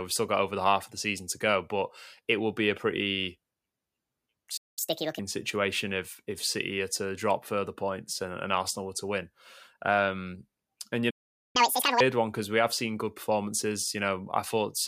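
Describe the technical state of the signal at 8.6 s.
At 8.6 s the speech signal is intact, with no audible fault at that moment.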